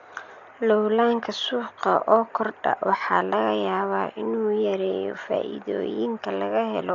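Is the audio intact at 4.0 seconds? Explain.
No. At 4.0 s, as throughout, the speech sounds dull and rough, with fluttering noise around tones, likely Dolby Digital compression at a low bitrate (heavy damage fitting roughly 40 kbps). Dither fills emptied frequency lines, and a spectrogram shows a hard ceiling near 6.9 kHz over speckled noise.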